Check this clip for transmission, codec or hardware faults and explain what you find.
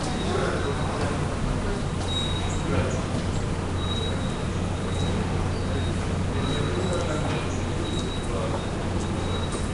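One fault runs through the whole clip: Nellymoser compression, most likely from the Nellymoser Asao codec once used for Flash microphone audio. It codes the signal in short fixed blocks with very few bits per sample, so weak frequency bands get no bits and are refilled with synthetic noise. Nothing is present above 10.6 kHz. The damage is plainly audible as a rough, hissy halo and a smeared, underwater character, which fits a rate around 44 kbps.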